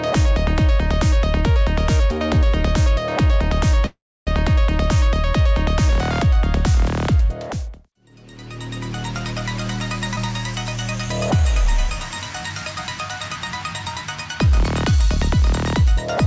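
At 3.86 s the sound stops flowing and a call audio freeze fills about 0.41 s, until 4.29 s. The last sound carries on briefly as a fading buzz before dropping to silence for roughly 0.29 s. The likely cause is delayed packets draining the jitter buffer. When delivery resumes the audio continues exactly where it halted, so nothing is lost. Unlike a dropout, this inserts a gap and pushes everything after it later.

At 10.16 to 10.19 s there is a skip ahead, the mirror image of the freeze. About a tenth of a second of audio is discarded, and the two sides are butted together with only a 10 ms bridge. There is no audible pause, just an abrupt jump where content goes missing. This is what happens when a jitter buffer sheds its backlog or a stretch is lost while later audio is already queued.

Two jitter buffer slow-downs follow, at 11.37 to 11.91 s and at 14.45 to 14.98 s. In each, the receiver rebuilds its reserve by repeating single pitch periods or bits of pauses. 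The first adds 36 ms and runs at 94% speed. The second adds 52 ms and runs at 92%. The pitch stays the same while sounds stretch out, so the audio drags rather than gapping or jumping. The G.722 call path cuts off everything above 8 kHz throughout.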